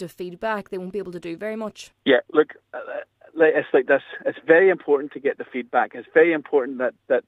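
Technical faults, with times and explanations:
No technical faults can be heard anywhere in the clip. There is nothing here that calls for a time or an explanation.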